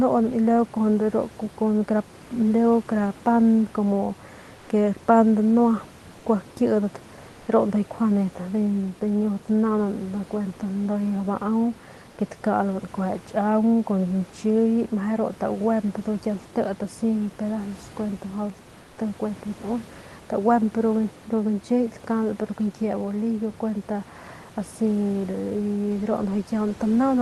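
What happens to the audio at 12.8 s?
At 12.8 s the speech carries on intact, with no dropout, glitch or other fault at that moment.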